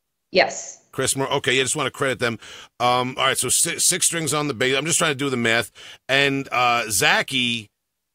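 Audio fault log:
Nothing stood out on listening to this speech recording.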